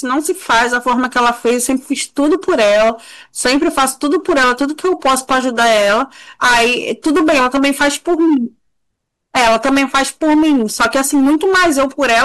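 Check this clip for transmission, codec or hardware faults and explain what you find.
Hard clipping runs through the whole recording. The speech was driven about 16 dB beyond what a stage in the chain could pass, so a large share of samples, around one in seven, hit the limit and were cut flat, adding harsh high harmonics that turn every loud syllable into fuzz.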